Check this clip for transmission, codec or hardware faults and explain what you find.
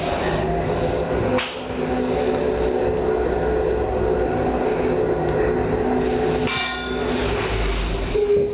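Gain pumping runs through the whole clip. The gain swings by around 15 dB, leaving the sound squashed and flat in level. The likely cause is input gain set far too high, with a fast limiter or compressor clamping down on each peak. The call path's band limit, with nothing above 4 kHz, fits a narrowband G.711-style codec.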